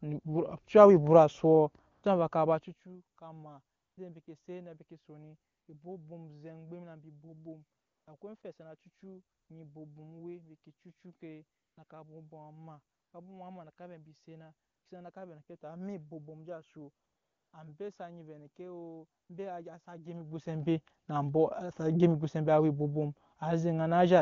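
Between 1.91 s and 19.29 s the background repeatedly switches to a steady, smooth hiss for 20 to 480 ms at a time, longest at 17.05 s just before "ambe sa nyi". This is AMR comfort noise: speech frames stopped and the receiver synthesized noise in their place.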